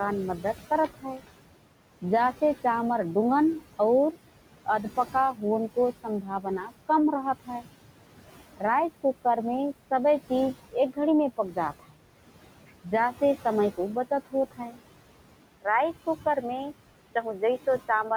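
Noise suppressor artifacts run through the whole clip. The suppressor pulls the room noise, which sits about 15 dB under the speech, down by about 17 dB between phrases, then lets it back up under them.

Speech cut by the noise suppressor occurs at 0.39 to 1.28 s, 4.65 to 7.65 s, 10.3 to 11.99 s and 13.75 to 14.77 s. Quiet consonants and endings are treated as noise and drop by about 17 to 18 dB. They sound swallowed, amounting to a few tenths of a second in each stretch and about half a second in the longest.

Input switched to a poorer device, from 15.44 s to the end. With no gap and about the same level, the sound turns dull and boxy. A faint new noise floor appears. This is likely a change to a narrower-band microphone or headset profile.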